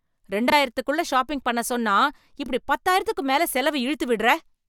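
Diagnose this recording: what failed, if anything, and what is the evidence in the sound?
Brief garbled flutters occur at 0.48–0.52 s, before "ஷாப்பிங் பண்ண சொன்னா", and at 2.44–2.49 s, before "பத்தாயிரத்துக்கும் மேல". This is frames out of order in network delivery: two adjacent 21.3 ms frames were swapped and decoded as received, with no time lost.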